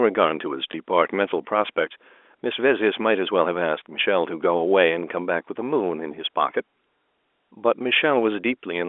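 A speech recording over a telephone-band line with a small blip at 0.72 to 0.74 s, from packet loss with the last packet repeated: about 20 ms of audio was lost, which fits a single dropped packet, and the previous one was replayed to fill the gap. The G.711 telephone coding keeps the sound within roughly 300 Hz to 3.5 kHz.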